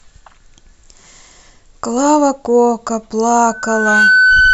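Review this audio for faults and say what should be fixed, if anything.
Loudspeaker feedback squeal from 3.46 s to 4.53 s: a 1.5 kHz tone builds over about half a second to roughly 5 dB above the speech, as microphone-to-speaker loop gain exceeds one. To prevent it, reduce monitor gain, move the microphone away from the loudspeaker, or notch out 1.5 kHz.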